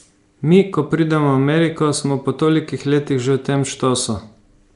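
Speech, with plainly audible codec damage from start to finish. It has a rough, hissy halo and a smeared, underwater quality. Nothing is present above 10.7 kHz. This is likely Nellymoser compression, Flash's old microphone codec, at a rate that fits roughly 44 kbps.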